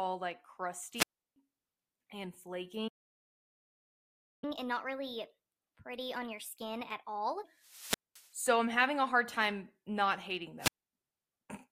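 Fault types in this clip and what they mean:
Wireless microphone squelch dropout: A brief swell of hiss collapses into near silence, then the speech returns, at 0.94 s, just before "I'm having a hard" and just after "hard time not hating". A fading FM radio link lets the receiver's squelch mute the output for 215 to 334 ms.
Playback stall: From 2.88 s the speech stops dead and stays silent for about 1.55 s before resuming at 4.44 s. The likely cause is the player running short of data or its thread being blocked, so output halted until it recovered.
Catch-up at higher speed: Right after the gap, from 4.44 to 7.44 s, the speech runs fast and sounds raised by roughly four semitones before settling back. The player is working through its backlog at 1.25 times normal speed, resampling to recover some of the lost time.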